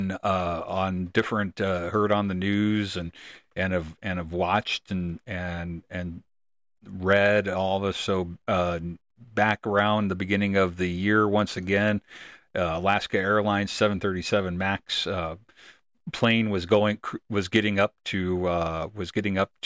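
No audible technical faults turn up anywhere in the recording.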